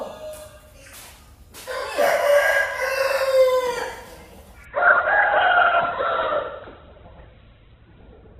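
At 4.65 s the audio switches to a lower-bitrate version of an adaptive stream, and it stays there to the end. The change is abrupt, with no gap. Nothing is heard above 4.1 kHz. Treble vanishes and compression artefacts thicken, which fits a drop to a very low Opus rate.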